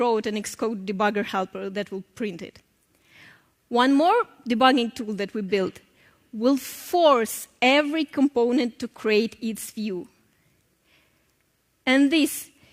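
Nothing in the recording catches the ear as a technical problem, so there's nothing to flag here.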